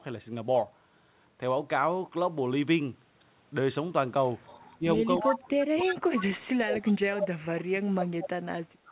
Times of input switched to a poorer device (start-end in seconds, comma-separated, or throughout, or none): none